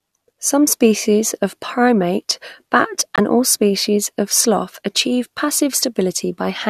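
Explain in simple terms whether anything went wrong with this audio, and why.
Yes, there's a corrupt frame muted fault. Just after "species of primate bat", from 3.16 to 3.19 s, the sound cuts abruptly to silence for about 34 ms, which fits a single damaged frame the decoder rejected. Unlike a skip, nothing is lost from the timeline, and "all species of sloth" arrives on time.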